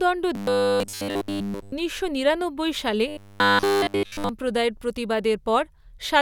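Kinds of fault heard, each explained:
Robotic sound from repeated short buffers: twice, from 0.35 to 1.72 s and from 3.08 to 4.30 s, the speech becomes a rigid metallic buzz fixed at 100 Hz that still loosely tracks the syllables. It is likely caused by audio arriving too seldom, so a chunk of about 10 ms is looped in place of nearly all the real signal. Unlike clipping or codec warble, the buzz stays at a fixed rate set by the repeat length.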